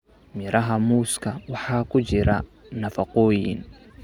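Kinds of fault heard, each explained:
No kinds of fault are heard in this speech.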